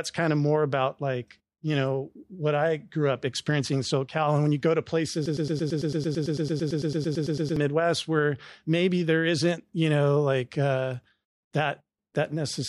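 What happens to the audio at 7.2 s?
At 7.2 s you're near the end of a broken-record loop that runs from about 5.26 to 7.57 s, just after "when you go to". A tiny 0.11 s slice of speech repeats exactly, back to back, 21 times, giving a fast stutter. Most likely the player or stream stalled and kept replaying its last fragment, so whatever should have been said there is simply gone until "where maybe there isn't" picks up.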